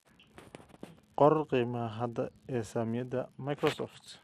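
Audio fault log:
Throughout, unreliable data bit: one line of the digital data path is marginal, so its bit comes out wrong in a random share of samples. Each error adds a spike of the same fixed size to the waveform. Because the errors depend on the hardware rather than on the signal, the spikes never stop, producing a steady crackling fizz that sits over the speech and carries on unchanged through the pauses between phrases.
Throughout, MP2 compression: the speech has likely passed through an MPEG Layer II encoder at a rate low enough to starve it of bits, which fits roughly 80 kbps. The encoder divides the spectrum into 32 equal sub-bands and switches the upper ones off entirely, so nothing is heard above 13.7 kHz and the sound is dull. Remaining bands are coarsely quantised and drop in and out, giving a plainly audible gurgling, granular roughness like low-rate digital radio.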